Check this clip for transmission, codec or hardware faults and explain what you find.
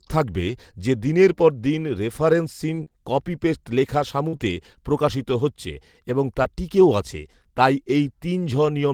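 Three kinds of network loss appear in this speech, all patched by the receiver, so none leaves true silence.

At 0.47 to 0.49 s, just before "যে দিনের পর দিন", a lost packet rebuilt from error correction: the next packet's low-bitrate copy fills 20 ms. It sounds briefly rough and noisy, and shows as a slightly smeared, grainier slice on a spectrogram.

From 2.75 to 4.41 s, between "দিনের পর দিন রেফারেন্সহীন" and "প্রকাশিত হচ্ছে এবং তা", there are scattered short gaps: about four, the longest around 40 ms. Each is bridged by extending the preceding sound, giving small ticks and hiccups. On a spectrogram these appear as brief stretched or blurred patches.

At 6.43 to 6.46 s, after "প্রকাশিত হচ্ছে এবং তা" and before "টিকেও আছে তাই", a short concealed packet loss: 20 ms went missing, 15 ms of it synthesised from the previous sound and blended back in. Another lost packet rebuilt from error correction covers 6.44 to 6.46 s. 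Together they produce a quick smear, visible as flattened harmonics in a spectrogram and a smoothed waveform envelope.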